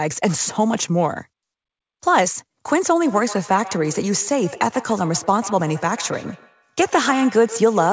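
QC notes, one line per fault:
3.05 s to the end, feedback echo between two devices: the sound returns roughly every 150 ms, thin and ringing, peaking about 16 dB below the speech, because a second device nearby replays the call and this microphone recaptures it, beyond its own echo canceller's reach.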